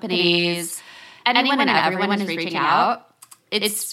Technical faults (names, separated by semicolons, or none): channel delay (doubling)